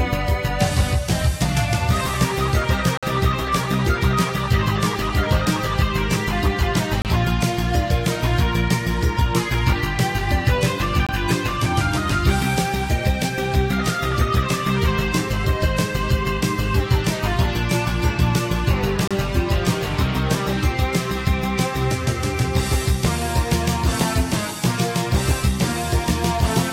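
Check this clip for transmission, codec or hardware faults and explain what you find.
Four short hard-edged dropouts to silence interrupt the sound at 2.97–3.03 s, 7.02–7.05 s, 11.07–11.09 s and 19.08–19.11 s, lasting about 22 to 52 ms. They mark gaps between stream segments: mismatched timestamps at 4-second segment joins leave holes the player fills with silence, adding time without losing audio.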